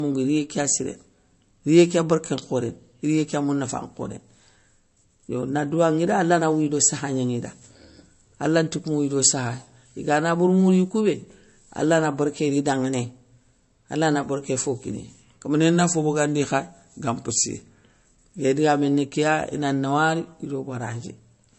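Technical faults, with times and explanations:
Throughout: low-bitrate audio saved at a high bitrate. The sound is dull, with nothing above 8.1 kHz. This likely comes from a low-bitrate MP3 (it fits about 40 kbit/s) being re-encoded at a high rate, which cannot restore the lost detail. A spectrogram shows a flat ceiling at 8.1 kHz.
15.55–17.85 s: drift correction step. Playback slows by 5.92% and pitch drops 106 cents, about a semitone flat, before snapping back. This is likely a clock-matching resampler adjusting its buffer. A spectrogram shows the harmonics sagging lower in a block, and the waveform is slightly stretched.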